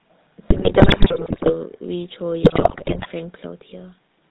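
Speech, carried throughout by the GSM full-rate codec. The damage is plainly audible. The voice has a buzzy, gravelly edge. Nothing survives above 4 kHz, so the sound is dull and boxed-in. This comes from the codec modelling the vocal tract and exciting it with a coarse pulse train that keeps only a third of the excitation samples. The roughness fits the 13 kbps full-rate coder. GSM bit errors strike twice, from 0.48 to 1.54 s and from 2.42 to 3.07 s. In both stretches the voice breaks into squawks, pops and gargling. Corrupted bits reach the decoder. Damaged filter, pitch or gain values then bend the spectrum or make the level jump frame by frame. The density of the damage points to roughly 6 percent of bits flipped, as on a weak radio link.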